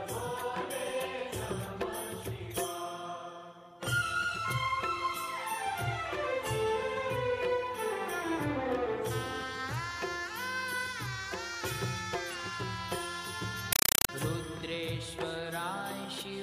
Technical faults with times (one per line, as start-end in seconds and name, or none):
13.73-14.09 compressed stream played as audio